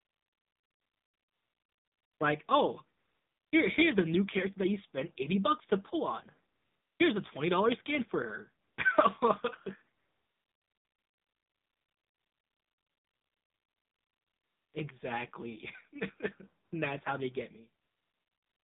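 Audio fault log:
Throughout: AMR narrowband mobile codec. Speech sits in a 150 Hz to 3.7 kHz band. At 7.4 kbps the pulse-driven vocal-tract model sounds plainly buzzy and synthetic.
0.0–2.2 s, 2.98–3.52 s, 6.54–7.0 s, 8.64–8.78 s, 9.98–14.74 s, 16.64–16.72 s, 17.82–18.65 s: AMR comfort noise. Speech frames stop, and the real background gives way to smooth synthetic noise that switches in and out.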